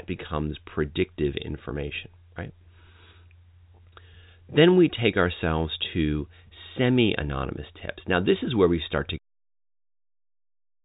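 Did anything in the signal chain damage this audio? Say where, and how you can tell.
No, nothing in the chain damaged this speech: the band stops at about 3.8 kHz, consistent with G.711 A-law telephone coding at 64 kbps with at most a faint quantisation floor, and the level falls away in a smooth, deliberate fade-out from around 9.0 s to 9.19 s with no click or hard edge.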